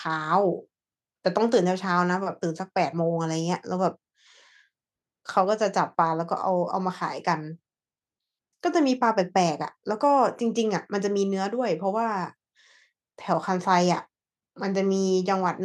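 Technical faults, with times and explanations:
No technical faults can be heard in this speech recording.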